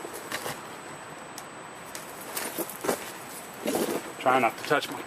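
A fixed whine at 8 kHz sits under the sound from start to finish, about 25 dB below it. This is USB whine: the bus's 125-microsecond microframe current pulses leak through power or ground. Mains hum would instead sit at 50 or 60 Hz and its harmonics.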